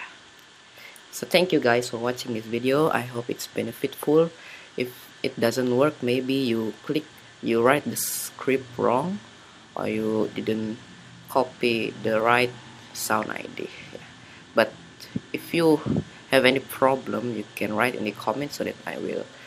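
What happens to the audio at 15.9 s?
Nothing goes wrong at 15.9 s; the audio plays through that moment cleanly, with no dropout, click, glitch or other fault to be heard.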